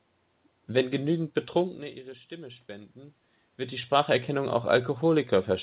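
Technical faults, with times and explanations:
No technical faults found: the room noise and the level shifts near 1.5 s and 3.5 s as the talker moves are part of the recording, and the lack of content above 4 kHz fits a narrowband G.711 mu-law call path.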